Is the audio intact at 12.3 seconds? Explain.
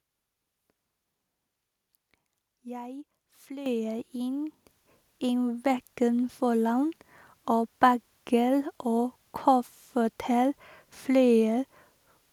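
Yes, the speech at 12.3 seconds plays through intact, with no dropout, glitch or other fault at that moment.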